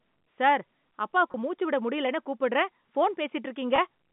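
Telephone speech, band-limited to about 150 Hz to 3.6 kHz by G.711 coding, has two brief packet loss with pitch repetition events, at 1.32–1.34 s and 3.76–3.78 s. Each bridges a 20 ms gap by repeating the last pitch period, which fits a single lost packet, giving a short held buzz.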